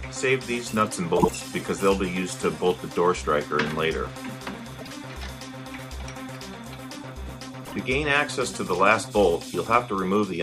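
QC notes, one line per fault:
1.17–1.29 s, 4.80–4.93 s, 7.65–7.73 s: frames out of order. Adjacent 52 ms blocks, 26 ms at 7.65 s, play swapped. This causes a garbled flutter.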